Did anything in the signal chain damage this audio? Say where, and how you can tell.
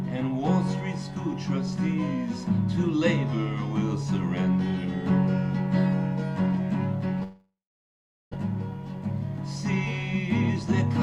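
Yes. The network stage likely suffered a long network dropout from 7.23 to 8.36 s. The receiver stretched the last sound into a fading buzz, then gave about 0.78 s of silence. About a second of audio is lost, and playback resumes slightly shifted in timing.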